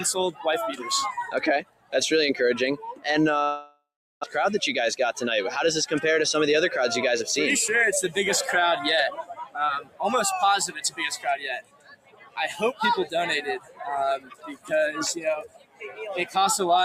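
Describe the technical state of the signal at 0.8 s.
At 0.8 s the signal is under a noise suppressor applied to music or sounds, a fault that runs through the entire clip. A suppressor tuned for speech is classifying sustained tones, ambience and reverberant decay as noise and attenuating them, while transients pass largely intact. The gain reduction swings by something like 15 dB, so held material and tails sink audibly after each attack, producing pumping, fluttering and a thinned, gated texture.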